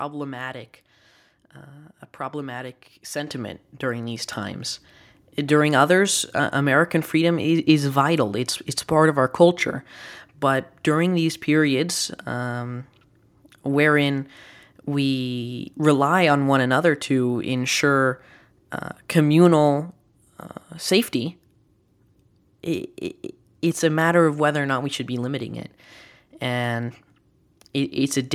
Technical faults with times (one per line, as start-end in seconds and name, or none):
3.27 microphone volume stepped up